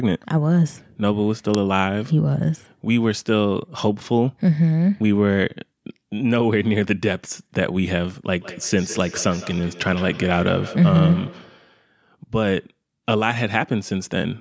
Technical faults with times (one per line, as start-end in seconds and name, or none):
1.54 uninitialised buffer
8.27-11.88 feedback echo between two devices